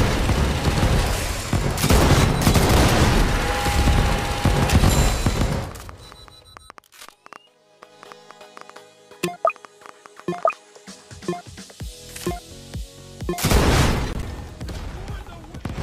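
From 5.72 to 10.54 s a train of clicks, about 30 irregular pops at 6.4 per second and near signal level, likely from interference or a faulty connection.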